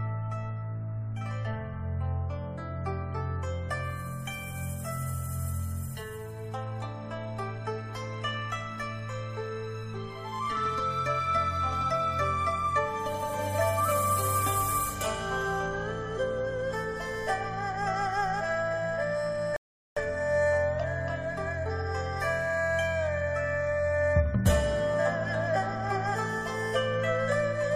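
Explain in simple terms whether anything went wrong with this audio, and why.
A rebuffering stall happens at 19.56 seconds: the sound cuts to silence and stays silent until 19.97 seconds, then carries on exactly where it left off. The player had used up all the audio it had downloaded, so it paused and waited for more to arrive. Nothing is skipped or missing, but the gap adds about 0.4 seconds to the playback, which comes across as an unexpected hiccup in the sound.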